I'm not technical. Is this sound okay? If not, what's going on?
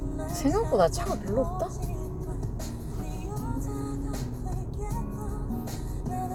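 Yes, nothing technically wrong can be heard anywhere in this recording, so there is nothing here that needs fixing.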